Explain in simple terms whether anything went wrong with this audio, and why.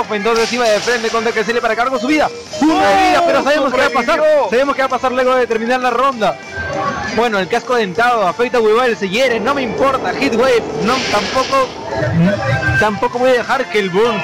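Nothing stood out as going wrong when listening to this recording.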